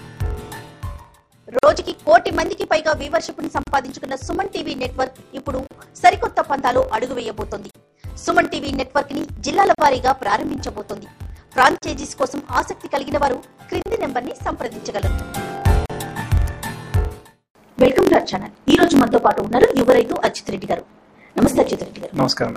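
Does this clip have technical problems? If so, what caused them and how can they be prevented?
Yes. A block size mismatch (truncated) runs through the whole clip. The sound carries a steady buzz at 45.9 Hz and plays 1.07 times faster than normal with no matching rise in pitch. One stage hands over longer blocks than the next stage reads, which fits 1024-sample blocks being written. The unread tail of each block is dropped, so every boundary leaves a discontinuity at the block rate, and the missing material shortens the running time. To prevent it, make the writer and reader agree on one block size, or buffer the surplus instead of discarding it.

Gaps at joins of encoded pieces open at 1.59, 3.63, 5.67, 7.71, 9.75, 11.78, 13.82 and 15.86 s. These come roughly every 2 seconds, and each silence lasts about 38 ms, except the first at 46 ms. The audio was encoded in separate pieces and joined without trimming, so each piece keeps its encoder's startup delay and its padded final frame. 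The result is a short dropout with its edges smeared by the codec, after which the sound resumes where it stopped. To prevent it, encode the material as one continuous stream, or trim each piece's encoder delay and padding before joining.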